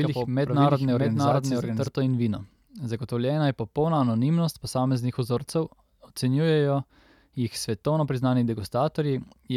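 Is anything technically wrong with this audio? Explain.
Yes. From the very start until 1.88 s, just before "in vino", the speech is heard as a doubled audio track. A second full-band copy runs about 0.7 s behind the original at roughly the same level, dry and without room decay, and it drops out abruptly at 1.88 s. The likely cause is the signal being captured twice, once through a slower path. On a waveform and spectrogram, every syllable pattern repeats about 0.7 s later with matching energy, and then the repetition stops sharply.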